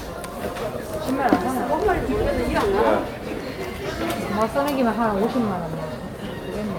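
The recording of sounds carries no audible technical faults at any point.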